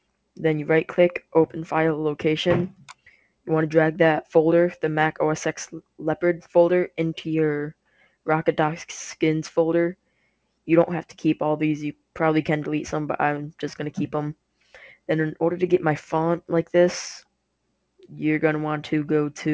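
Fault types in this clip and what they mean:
Sound cut by the noise suppressor: The call's noise suppressor mistook parts of the sound for background noise and turned them down. This happens three times, at 2.79 to 3.47 s, 7.86 to 8.27 s and 9.99 to 10.67 s. At its deepest, the level sinks by about 16 to 18 dB. Only a few tenths of a second are hit in each stretch. The affected sound turns faint, then comes back.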